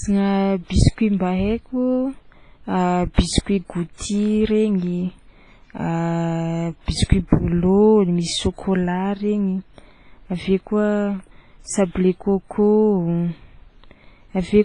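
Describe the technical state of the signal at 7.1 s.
A burst of pre-echo runs from 7.04 to 7.09 s, about 55 ms. A sharp attack sits late in a transform block. Its quantisation noise spreads backward into the quiet gap, so a brief hiss precedes the onset and the attack sounds softened and smeared.

The speech carries heavy damage throughout, likely from WMA compression. Nothing remains above 10.1 kHz, which fits a low bitrate near 24 kbps. Long blocks let noise smear in time. The sound is ringing and washy, with hiss that breathes with the signal.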